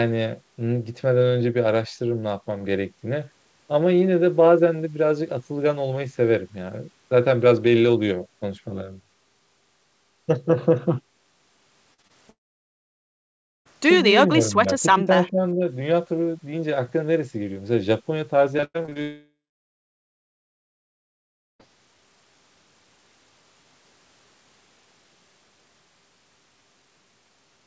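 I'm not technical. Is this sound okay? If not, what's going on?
No, there are a few clear problems, mostly bunched between about 12 and 22 seconds.

First come three bits of short concealed packet loss, at about 11.94, 12.02 and 12.07 seconds. Tiny pieces of the call, each a few hundredths of a second, arrived too late to play. The receiving end papered over each hole by stretching out whatever sound came just before, then blended back in. You'd hear that as a quick smear or little wobble, and a short sound could get swallowed.

Right after that, from about 12.29 to 13.67 seconds, there's a long network dropout, and there's another from about 19.02 to 21.63 seconds. The likely cause is that nothing got through the connection for a while. The system briefly drags out the last sound, then it goes quiet: about 1.3 seconds of near-silence in the first gap and a bit over 2 seconds in the second. 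When the sound comes back, whatever was said during the gap is simply gone.

Between about 14.29 and 15.63 seconds there's speech suppressed in double talk. Here the sound gets noticeably quieter in patches, adding up to about 0.7 seconds. This was likely the call's echo control getting confused because both people were talking at once. It couldn't tell the real talker from echo coming out of the other person's speaker, so it turned things down.

Just before the second long gap, from about 18.57 to 19.0 seconds, there's repeated packet loss, which gives a robotic sound. Eight separate holes hit in under half a second, the longest about a tenth of a second, and roughly half that stretch is patched-in filler rather than real audio. Each fix barely finishes before the next hole arrives, so it comes out choppy.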